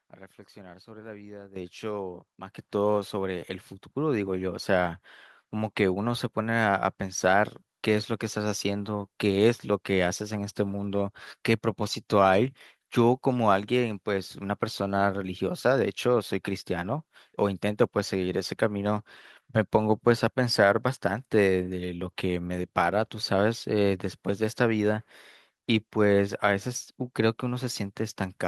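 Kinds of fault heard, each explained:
Microphone volume stepped up: the call software judged the microphone too quiet and raised its input gain in discrete steps, so voice and background jump together, by about 10 dB at 1.56 s, then about 5, 2 and 2 dB at 2.58, 3.6 and 4.62 s.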